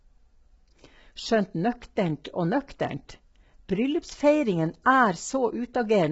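From the start of the clip to its end, the speech carries heavy low-delay AAC compression damage. The voice sounds rough and grainy. Noise fills the gaps between the pitch harmonics. Nothing is heard above about 7.7 kHz, so the top band is cut off and dull. The likely cause is AAC-ELD at a low bitrate, around 16 kbps. At that bitrate each frame gets too few bits, so the spectrum is quantized coarsely, leaving too few for clean detail.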